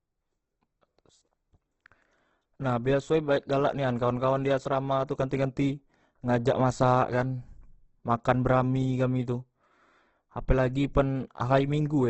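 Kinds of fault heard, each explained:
Opus compression: throughout, the speech sounds heavily grainy and rough, with nothing above 8.2 kHz. That fits a likely cause of Opus music-mode coding near 12 kbps, filling starved bands with noise. A spectrogram shows a hard 8.2 kHz ceiling and noisy texture with few holes below.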